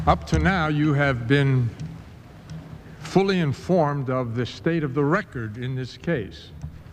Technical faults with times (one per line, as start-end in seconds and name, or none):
none